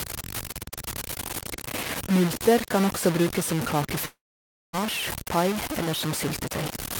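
Speech, heavily gritty throughout: the grain rises and falls with the voice, and quiet passages sputter or vanish, with the error nearly as loud as the signal itself. This points to truncation to about 4 bits, likely low bit depth without dither. From 4.05 to 4.75 s, the sound trails off into a fading buzz, then silence, before resuming with that stretch missing, which fits a long network dropout.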